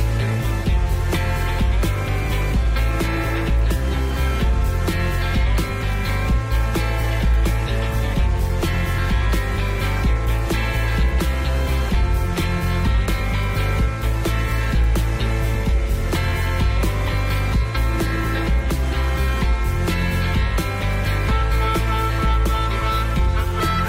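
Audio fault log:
No fault is heard in this audio.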